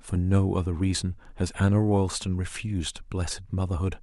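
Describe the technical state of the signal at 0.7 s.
At 0.7 s the speech signal is intact, with no technical fault present at that moment.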